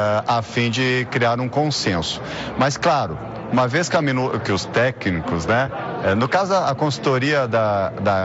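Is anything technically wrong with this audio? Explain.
No, nothing stood out on listening to this audio.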